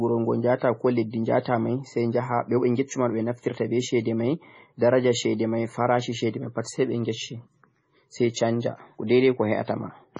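The speech runs through with heavy MP3 compression artefacts. Nothing sounds above about 10.4 kHz, and weak frequency components flicker between frames, giving a watery, swirly texture, metallic s sounds and smeared attacks. That points to a low bitrate, likely around 24 kbps.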